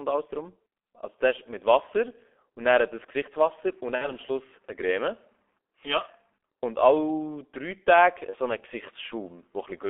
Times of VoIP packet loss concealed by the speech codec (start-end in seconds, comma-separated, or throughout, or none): 3.95-4.13, 8.30-8.36